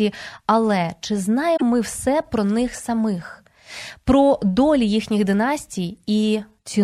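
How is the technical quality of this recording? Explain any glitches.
One glitch stands out in this speech recording. From 1.53 to 1.63 s there is damaged data in a compressed stream: corrupted bytes make the decoder misread frames and lose sync until it finds a valid header, producing a brief glitch. The waveform shows an abrupt discontinuity.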